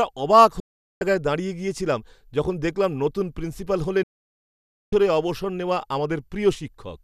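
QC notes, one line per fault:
0.60–1.02 s and 4.03–4.93 s, digital broadcast dropout: speech mutes abruptly, with a fade of about 3 ms, for 0.42 s and then 0.90 s. The receiver silenced failed frames, so the audio is lost, not smeared, stretched or filled in as concealment would do.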